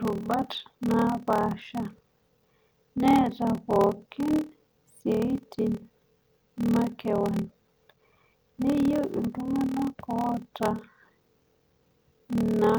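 From start to finish, the speech carries a block size mismatch (padded). Each block written is shorter than the block read, so zeros fill the remainder. That gap repeats at 38.3 Hz, heard as a steady buzz. Delivery runs at 0.889 times normal speed, timbre unchanged. The ratio fits 1024-sample writes.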